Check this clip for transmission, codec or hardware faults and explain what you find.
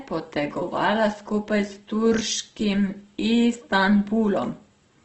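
The speech shows one codec fault, present throughout: heavy Opus compression, likely in its CELT music mode. Short of bits, the encoder fills bands with folded or noise content, so the speech sounds rough and grainy, and nothing remains above 8.1 kHz, which fits a low rate near 12 kbps.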